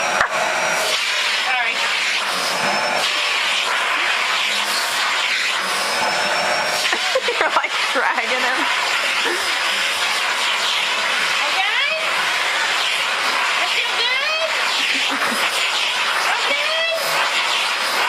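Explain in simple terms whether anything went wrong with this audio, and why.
Nothing went wrong here; the sound stays clean throughout.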